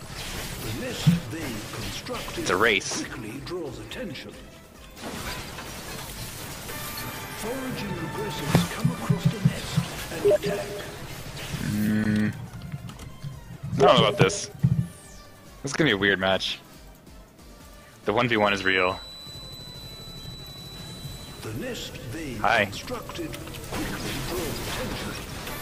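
A feedback whistle from 18.28 to 21.52 s: a 4 kHz tone that swells and fades slowly, about 15 dB below the sound, likely a speaker-to-microphone loop poised at feedback.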